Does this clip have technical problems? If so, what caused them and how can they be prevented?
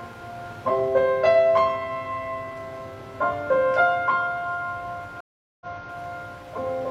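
Yes. There is a stream reconnect between 5.21 and 5.93 s. The connection dropped, so playback goes silent for about 0.40 s. The player then reconnected and started a new decoder mid-stream. The audio resumes about 0.33 s earlier than where it cut off, so that stretch of sound is heard twice. This points to the server resending recent data on reconnection. Larger client buffering and a more stable network path would prevent it.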